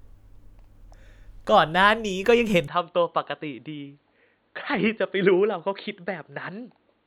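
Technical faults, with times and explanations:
2.68 to 7.06 s, input switched to a poorer device: speech abruptly turns dull and drops about 10 dB, with nothing above 4.4 kHz and faint new background noise, likely from a change to a narrower-band microphone.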